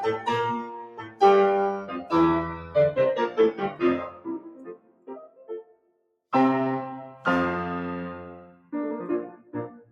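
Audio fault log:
Throughout: noise suppressor applied to music or sounds. A speech-oriented suppressor is treating sustained tones, ambience and reverb as noise, so its gain swings by roughly 15 dB as the music moves. Attacks pass while held parts sink, giving a pumping, thinned sound.
0.57–1.21 s, 1.85–2.12 s, 2.54–2.75 s, 3.29–3.82 s, 4.07–6.16 s: sound cut by the noise suppressor. Sustained and decaying passages are pulled down by about 8 to 14 dB, deepest in the first and last runs. The longest run lasts near two seconds.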